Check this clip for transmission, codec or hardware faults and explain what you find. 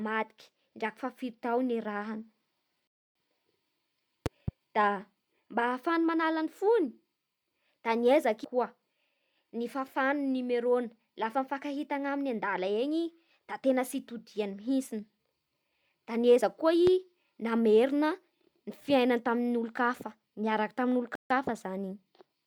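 There are two kinds of fault here: a couple of rebuffering stalls and a couple of loud pops.

The rebuffering stalls come at 2.87 to 3.15 s and 21.15 to 21.30 s. The player ran dry of downloaded audio, paused, then picked up exactly where it stopped. You hear the speech drop to silence for about 0.28 s and then 0.15 s. Nothing's missing, just time added.

The loud pops are at 4.26 to 4.51 s, where there's a quick double pop, and at 16.87 to 16.90 s, a single one. Both jump well above the speech, which carries on underneath. The likely cause is a voltage spike from a plug, switch, static or driver glitch.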